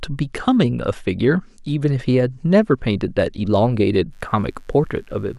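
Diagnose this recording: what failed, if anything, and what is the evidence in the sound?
A mains buzz comes in at 4.10 s and runs right to the end at 5.39 s. It's a steady, raspy buzz sitting well under the speech, roughly 40 dB down, built on 50 Hz. That points to the analogue wiring: a dimmer, rectifier or poor shielding is injecting sharp switching spikes twice per mains cycle, and those spikes carry a ladder of 50 Hz harmonics up into the kHz range, which gives it the edge.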